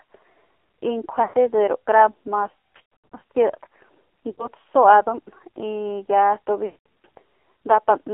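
From the start the whole thing has gone through the AMR narrowband mobile codec, and hard. Everything sits between about 300 Hz and 3.4 kHz, and the speech has that buzzy, synthetic edge you get when a vocal tract model is fed very few pulses per frame. The damage is heavy and fits one of the low modes, around 5.9 kbps, so nothing here sounds natural.

On top of that there are lost AMR speech frames, where the decoder keeps replaying its last good pitch and vocal tract settings while the gain sinks. At 1.24 s about 100 ms goes missing, heard as a smeared, fading stretch. From 2.78 to 3.21 s around 300 ms is lost in patches over 440 ms, with runs no longer than 100 ms, giving a stuttering warble. At 4.32 s a shorter 60 ms dip follows. Then from 6.66 to 7.06 s about 200 ms drags out and sags, and the speech comes back rough for a moment.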